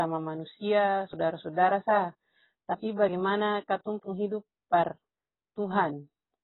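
Speech runs the whole way through a likely heavy AAC compression at a very low bitrate, consistent with about 16 kbps AAC-LC, leaving nothing above 3.9 kHz. The voice sounds dull and muffled throughout, with a smeared, warbling, fizzy texture on sustained sounds and sibilants.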